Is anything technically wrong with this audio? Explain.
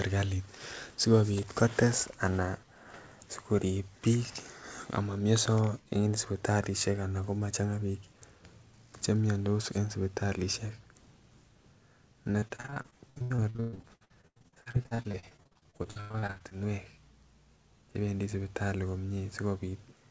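Yes, there's a stretch of repeated packet loss with that robotic sound, from about 12.32 s to 16.53 s. Over those four seconds, packets kept going missing or arriving late, dozens of them, with the longest hole around 120 ms. Each gap gets patched by stretching the last bit of sound forward, and roughly 42% of the span ends up concealed that way. You hear it as choppy speech with chunks dropped out. Throughout the clip the band also tops out at 8 kHz, which fits a G.722 call path.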